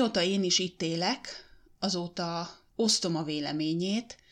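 Speech with no audible faults.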